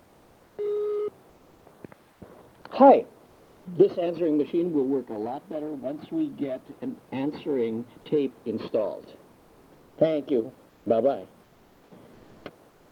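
Comfort noise in place of the background appears at 2.13 to 2.21 s, 9.31 to 9.97 s, 10.69 to 10.85 s and 11.43 to 11.91 s. In these quiet gaps, with the background about 30 to 36 dB below the loud parts, the real ambience gives way to a smooth, featureless hiss about 4 to 6 dB quieter, lasting from 80 to 660 ms. The likely cause is discontinuous transmission, as in Opus DTX, with the receiver synthesising filler noise.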